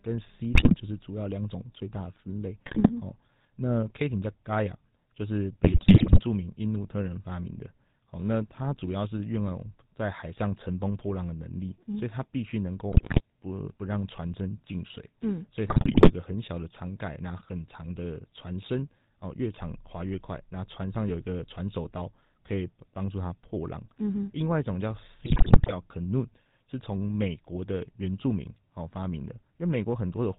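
The whole recording runs through the GSM full-rate codec, and you can plainly hear it. Everything above 4 kHz is gone, and the coarse pulse-driven excitation gives the speech that gravelly, buzzy grit, which fits the old 13 kbps full-rate coder.

On top of that, GSM bit errors break through six times: 0.54 to 0.74 s, 2.62 to 2.91 s, 5.64 to 6.20 s, 12.92 to 13.21 s, 15.68 to 16.12 s and 25.20 to 25.73 s. Corrupted filter, pitch and gain values reach the decoder, so each burst turns into squawks, pops and gargling.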